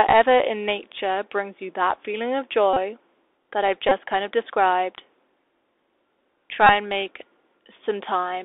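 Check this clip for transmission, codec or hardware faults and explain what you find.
Two faults are present: a Bluetooth CVSD headset codec throughout, and three short bursts of repeated Bluetooth headset packets.

The Bluetooth CVSD headset codec runs for the whole clip. The speech sits in a narrow line band of roughly 300 Hz to 3.6 kHz. The one-bit delta coder can't follow fast, loud high-frequency movement, so sibilants turn scratchy and a plainly audible granular hiss runs underneath the speech.

Bluetooth headset packet repeats occur at 2.73 to 2.78 s, 3.89 to 3.93 s and 6.67 to 6.69 s. Lost packets were replaced by re-decoding the previous packet's bits. Each repeat recurs every 3.75 ms, so each run gives a brief buzz near 267 Hz.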